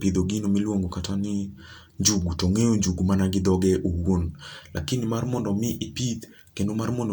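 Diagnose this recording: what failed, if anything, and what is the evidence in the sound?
Nothing in the signal chain appears to have failed, as no stage of capture, conversion, transmission or playback leaves an audible fault anywhere in this speech recording.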